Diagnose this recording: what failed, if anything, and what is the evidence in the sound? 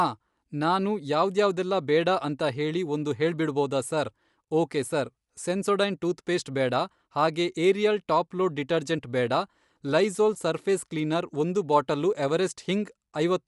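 The speech has a breathy, grainy edge on its upper consonants and sibilance from start to finish, and nothing is present above about 11.5 kHz. This is a codec-stage fault, most likely Bluetooth LC3 compression. The transform coder seems to be short of bits in the top band and to be filling it with synthetic noise rather than real detail. The damage is plainly audible, which fits a rate around 48 kbps with 10 ms frames.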